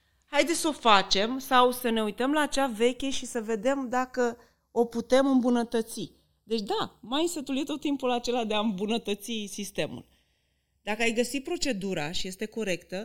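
Speech clip with channels drifting apart throughout: the two channels run on separate clocks about 30 ppm apart, so their offset slides to roughly half a millisecond by the end. Summed to mono, this gives slow flanging, seen on a spectrogram as comb notches gradually sweeping.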